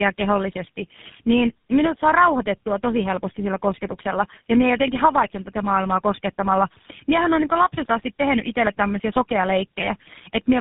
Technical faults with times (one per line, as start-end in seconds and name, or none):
0.00-10.61 tandem speech coding